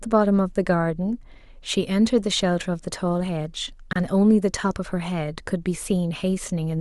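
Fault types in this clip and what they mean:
Gap at a join of encoded pieces: at 3.93 to 3.96 s a 30 ms silence cuts into continuous speech, with smeared edges. The speech was encoded in separate pieces, about 4 s long, and joined untrimmed, leaving encoder start delay and last-frame padding.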